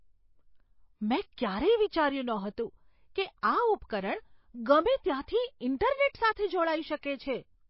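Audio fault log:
Throughout, MP3 compression: the speech has a clearly watery, swirly quality, and there's nothing at all above about 5.6 kHz, so the top end feels cut off flat rather than rolling off naturally. That hard ceiling plus the warbling is likely the encoder running short of bits, dropping the treble at a fixed point and letting weak frequency lines flicker on and off between frames, which fits a low bitrate around 24 kbps.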